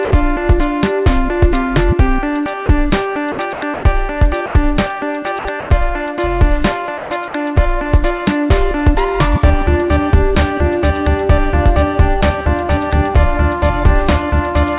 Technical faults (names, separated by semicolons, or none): sound dropped by the voice detector; sound chopped by the voice detector